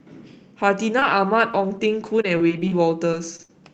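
Speech, and from about 0.99 s to 3.50 s it breaks up with repeated packet loss, giving that robotic sound. There are roughly ten short holes, the longest about 58 ms. Each one gets papered over by stretching the last bit of sound, so around a tenth of that stretch is concealment and something like 0.7 s in all is rebuilt, which is why it turns choppy. It's going through a call codec, most likely Opus, with the top end stopping around 8 kHz.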